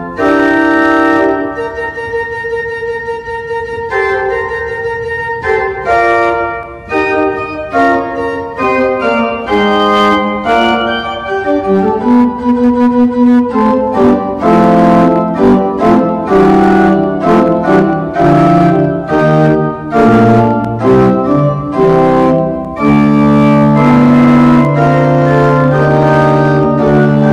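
Throughout, the signal drives some stage about 10 dB past its limit, so roughly 7 percent of samples are cut flat, giving hard clipping: harsh fuzz on every loud peak.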